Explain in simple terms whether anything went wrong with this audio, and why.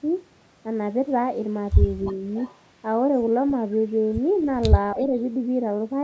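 A few short problems can be heard in this speech recording.

At 2.36 to 2.58 s, 4.38 to 4.44 s and 4.99 to 5.18 s, a faint, delayed copy of the voice comes back, trailing it by about 0.29 s and getting quieter each time. This is echo leak. The likely cause is that one side of the call was on a loudspeaker, and its echo canceller didn't fully remove what its microphone picked up, so a bit of the sound was sent back.

At 4.94 to 5.01 s, the main voice briefly dips a little for only a fraction of a second, right as that last echo begins. This is speech suppressed in double talk. Two sounds overlapped, and the echo canceller likely couldn't tell the real talker apart from the returning echo, so it turned both down for a moment.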